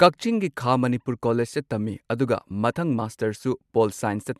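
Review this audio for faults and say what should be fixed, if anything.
Nothing needs fixing, as the signal shows no technical faults anywhere in the recording.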